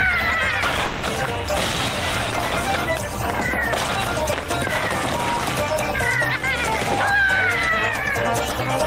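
Right near the start, from about 0.85 to 1.05 s, the sound breaks off and is replaced by a fading buzzy continuation for roughly 180 ms, then resumes with that stretch simply gone, no true silence in between. That's the signature of a long network dropout, likely packets that never arrived.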